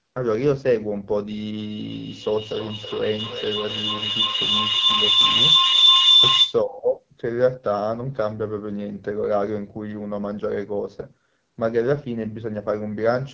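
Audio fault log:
Throughout: AMR wideband (HD Voice) codec. The speech is plainly rough and raspy, as at a low rate near 8.85 kbit/s. The codec rebuilds the voice from a pulse-driven vocal tract model up to 6.4 kHz. Above that it fills in shaped noise. That thin model makes the grain.
1.55 to 6.68 s: feedback howl. A tone around 4 kHz builds up and peaks about 8 dB above the speech. The loop repeats roughly every 300 ms. Sound loops from a loudspeaker into a microphone on the same call, and it gains on each trip. Each pass narrows it toward the loop's favoured pitch.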